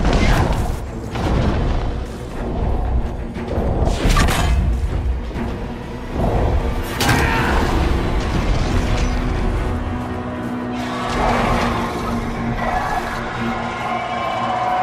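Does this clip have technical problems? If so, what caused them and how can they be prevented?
Yes. Corrupt frames were decoded: bit errors in compressed frames went undetected and the decoder played them, so misread gains and codes put energy at the wrong frequencies. The result is brief, loud blips at 1.45–1.48 s, 7.19–7.26 s and 8.71–8.74 s. Frame checksums with concealment of failed frames would prevent this.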